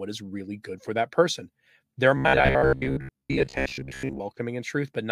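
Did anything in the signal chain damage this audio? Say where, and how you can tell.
Yes. From 2.17 to 4.21 s, speech gets a rigid 67 Hz buzz: robotic sound from repeated short buffers. Likely a buffer underrun repeating 15 ms chunks.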